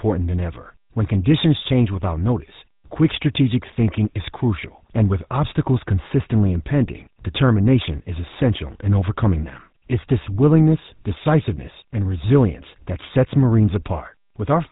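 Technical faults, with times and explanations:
Throughout, GSM full-rate codec: the speech has been squeezed through the original GSM coder, which models the vocal tract as a filter and excites it with a regular pulse train built from only every third excitation sample, a scheme that fits its 13 kbps rate. The thinned excitation gives the speech a plainly audible buzzy, gravelly roughness, and nothing above 3.8 kHz is passed, so the top end sounds boxed in and dull.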